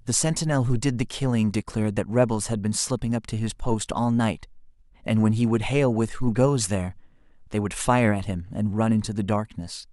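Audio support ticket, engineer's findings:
No faults found in clip.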